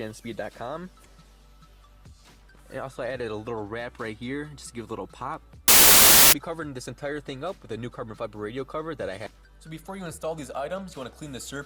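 From 5.68 to 6.33 s the reader assembles samples from the wrong bytes, promoting fast-changing low bits, so the audio becomes a burst of loud, harsh broadband noise.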